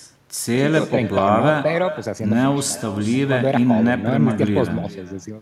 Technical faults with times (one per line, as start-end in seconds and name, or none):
0.00-5.41 echo with no canceller